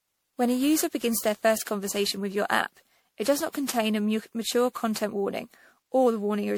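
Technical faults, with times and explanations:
Throughout, generation loss: the speech sounds swirly, hollow and smeared, with blurred attacks, likely from repeated MP3 encoding, around fifteen passes at what sounds like 96 kbit/s. A single encode at that rate would be far cleaner; here the damage compounds as each pass re-quantises on a shifted frame grid.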